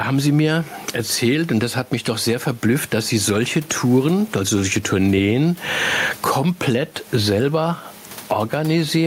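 Gain pumping throughout: room noise swells roughly 15 dB between phrases and ducks under loud speech, likely from excessive input gain held down by a fast limiter.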